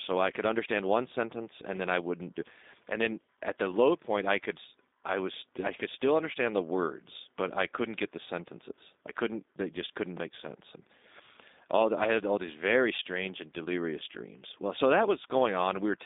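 Throughout, the speech has passed through a G.729 codec, which fits an 8 kbit/s G.729A link rebuilding each frame from a vocal tract model and a few pulses. The band runs from 250 Hz to 3.7 kHz, nothing above 3.8 kHz, sounding plainly rough and synthetic.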